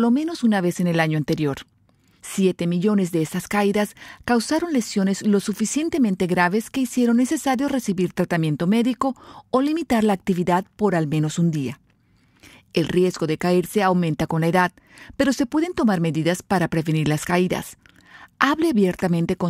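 It's a speech recording, and there's nothing technically wrong to point out anywhere in it.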